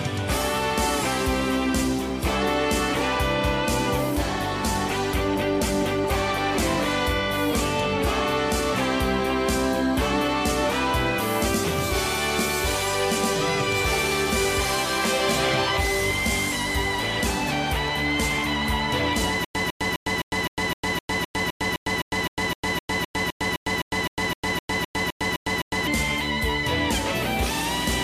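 From 19.45 to 25.87 s a stutter with silent gaps repeats a 153 ms burst 25 times, each followed by 104 ms of digital silence, a 257 ms cycle. It likely comes from a stalled stream replaying its last fragment. The waveform shows identical blocks separated by flat silent gaps.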